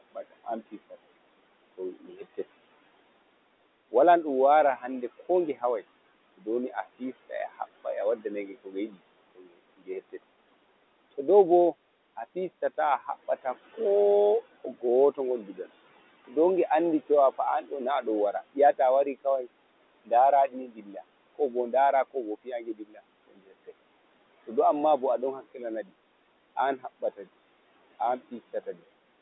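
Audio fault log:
Throughout: noise suppressor artifacts. The room noise, about 18 dB under the speech, is pulled down by about 21 dB between words and rises under them.
0.00–2.39 s, 3.91–10.19 s, 11.18–28.83 s: speech cut by the noise suppressor. Soft speech mistaken for noise is dropped by up to about 22 dB, swallowing roughly 5 s of endings and consonants in all.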